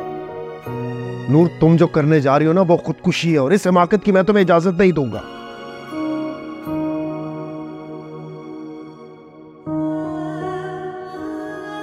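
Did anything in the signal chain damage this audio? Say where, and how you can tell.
No, nothing audible points to damage at any stage of the chain.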